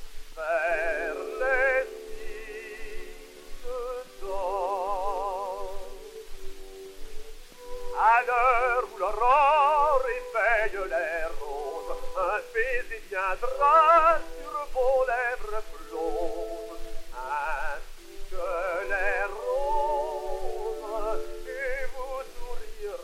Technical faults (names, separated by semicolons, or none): none